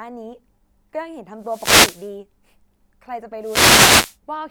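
A speech clip with two wireless microphone noise hits, from 1.38 to 2.16 s and 3.40 to 4.18 s, where the FM radio link fades and receiver hiss swells over the voice. A spectrogram shows broadband noise smearing across the speech harmonics; the waveform shows a thickened noise floor.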